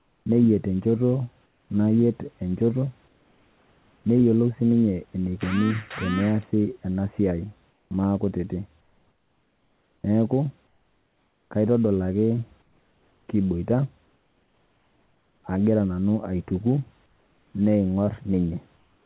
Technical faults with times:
0.00-0.26 comfort noise in place of the background
1.46-1.70 comfort noise in place of the background
3.08-4.04 comfort noise in place of the background
7.70-7.91 comfort noise in place of the background
8.81-11.51 comfort noise in place of the background
12.62-15.44 comfort noise in place of the background
17.06-17.54 comfort noise in place of the background
18.77-19.06 comfort noise in place of the background

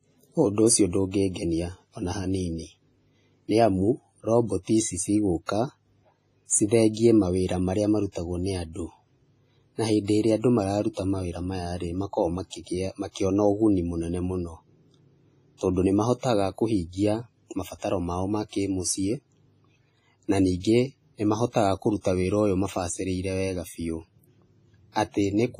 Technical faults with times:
0.00-25.59 WMA compression
5.46-5.49 pre-echo
15.57-15.61 pre-echo
16.18-16.23 pre-echo
20.60-20.64 pre-echo

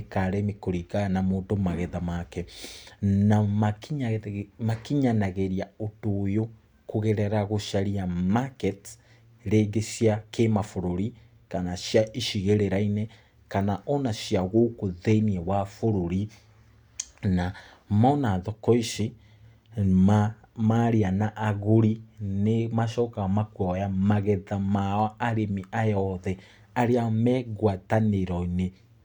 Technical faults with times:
none

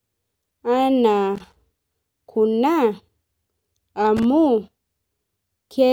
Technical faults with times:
1.36-1.58 loose connector crackle
4.17-4.25 loose connector crackle

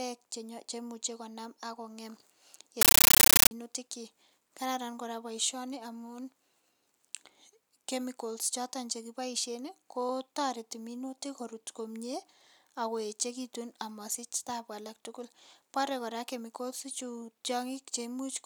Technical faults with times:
2.81-3.51 compressed stream played as audio

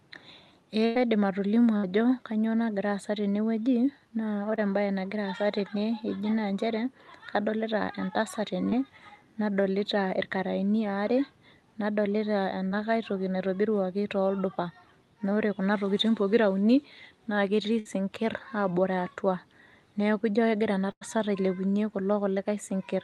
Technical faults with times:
0.85-0.97 burst of packet loss
1.77-1.85 burst of packet loss
4.55-4.59 short concealed packet loss
8.69-8.73 short concealed packet loss
12.67-12.73 short concealed packet loss
17.79-17.87 burst of packet loss
20.91-21.03 burst of packet loss

